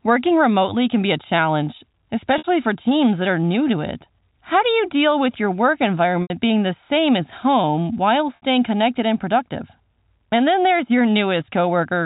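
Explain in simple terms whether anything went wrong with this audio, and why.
Three brief gaps occur, at 2.38–2.44 s, 6.22–6.30 s and 8.36–8.42 s, lasting 60, 80 and 60 ms. This is packet loss with pitch repetition. Chunks of audio went missing, so the receiver replayed the last pitch cycle, making the sound briefly hold with a buzz.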